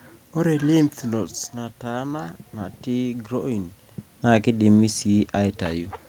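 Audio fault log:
No system faults found; the room noise and the level changes around 1 s and 3.5 s, where the talker moves relative to the microphone, are part of the recording.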